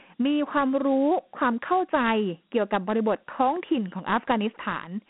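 A speech clip carrying Dialogic VOX ADPCM damage throughout: the 4-bit coding adds a plainly audible gritty hiss that tracks the voice, the band runs about 200 Hz to 3.4 kHz, nothing appears above 3.9 kHz, and the sound fits a 32 kbps rate.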